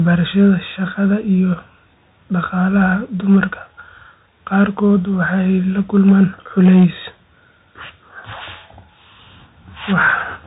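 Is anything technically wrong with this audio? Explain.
Yes. Throughout, the speech sounds muffled and scratchy over a grainy hiss, with nothing above 3.8 kHz. That is Bluetooth CVSD headset codec damage: one-bit up/down steps (fitting a 64 kbit/s stream) can't follow fast, loud high sounds.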